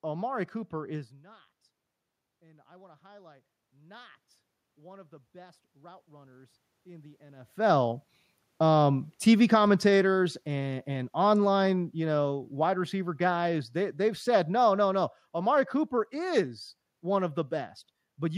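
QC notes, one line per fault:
2.26–8.07 s, automatic gain rising: after the input dropped by about 24 dB, the gain control raised its gain by about 11 dB over nearly six seconds. Voice and room noise swell together, which sets it apart from the talker simply moving around 7.5 s.
9.22–16.51 s, automatic gain falling: the gain control judged the input too loud or its background noise too strong and lowered gain by about 10 dB over roughly seven seconds. The room noise sinks along with the voice, unlike a talker leaning back, where only the voice fades.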